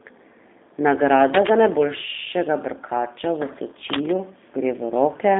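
G.729 codec runs throughout: the speech is rebuilt from a vocal tract filter and sparse pulses, which fits 8 kbit/s, leaving it rough, synthetic and empty above 3.7 kHz.

Cable scratch noise occurs from 1.30 to 1.49 s and again from 3.90 to 4.15 s: dense, uneven rustling bursts about as loud as the speech, likely from a worn cable or connector being moved.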